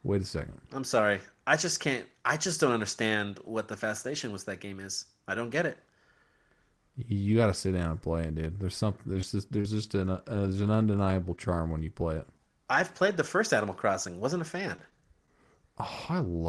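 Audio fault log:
9.13 to 11.54 s, scattered short gaps: about seven separate packet losses spread across this stretch, the longest around 40 ms. Each hole is bridged by extending the preceding sound, leaving isolated ticks and small smears rather than a continuous choppy texture, since the holes are spaced well apart.
12.01, 12.76, 12.81, 13.06 and 15.87 s, lost packet rebuilt from error correction: five single 10 ms frames were replayed from the low-bitrate backup copy carried in the following Opus packet. There is no gap or smear, only a momentary roughness and added noise, which sets these apart from concealed losses.
12.37 s, short concealed packet loss: one 10 ms frame never arrived, and the decoder invented about 8 ms of replacement by carrying the last sound forward before crossfading back. The result is a single brief smear or wobble with no rebuilt backup copy behind it.
14.76 to 15.28 s, repeated packet loss (robotic sound): four gaps, none longer than 20 ms, come in close succession, so about 50 ms of invented fill makes up roughly 10% of the half-second span. 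Patches follow one another too closely to recover between them, giving a choppy quality instead of isolated ticks. The call codec's upper band cut near 12 kHz lies under all of these.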